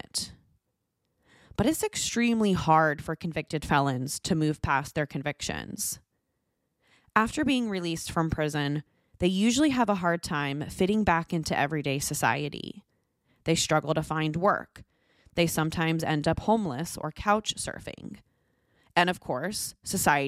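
No technical faults can be heard anywhere in this recording.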